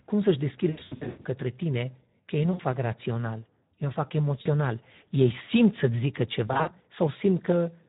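A speech clip, coded throughout with the Speex codec. The voice sounds hoarse and noisy, which fits a low setting around 11 kbps. Too few bits reach the excitation signal, so the rough texture never clears. VoIP packet loss concealed by the speech codec hits four times. From 0.69 to 1.28 s, about 420 ms of sound drops out in scattered gaps, the longest 120 ms. The sound is stretched and fades before "tine că ei nu". Shorter gaps follow at 2.52 to 2.61 s, ending before "rațional o fac", and at 4.41 to 4.48 s. A scattered gap at 6.47 to 6.71 s loses about 120 ms. At each gap the decoder repeats its last pitch and filter at falling gain, so the sound smears and fades before recovering.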